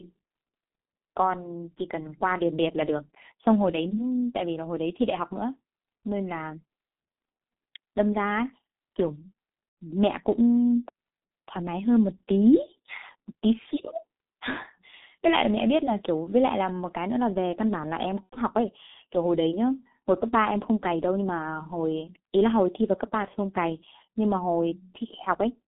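Speech heard through a G.723.1 codec for its whole length sounds muffled and hoarse, and consonants smear together. The line passes roughly 200 Hz to 3.7 kHz, so a spectrogram shows a hard ceiling just under 4 kHz with nothing above it, plus blurry, coarsely stepped formant bands. The heavy damage fits a coder near 6.3 kbit/s that rebuilds its voice model only every 30 ms frame. It cannot follow fast spectral changes, so onsets and fricatives lose their sharp edges.

VoIP packet loss concealed by the speech codec occurs twice, at 9.68–9.77 s and at 18.24–18.38 s. Each time about 90 ms of audio is missing, which fits three lost 30 ms frames. The decoder fills the gap by repeating its last pitch and filter. This sounds like a brief stretched sound, a buzzy tone or coloured noise, that fades out. On a spectrogram it appears as a flat, unchanging pattern that dims toward the end. The waveform shows a stretch with shrinking amplitude, and the level stays weak for a moment after real packets resume.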